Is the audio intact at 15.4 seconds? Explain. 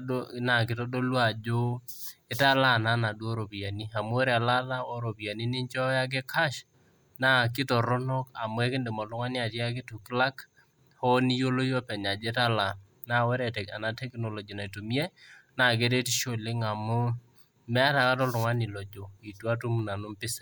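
Yes, the speech at 15.4 seconds plays through cleanly with no fault at that moment.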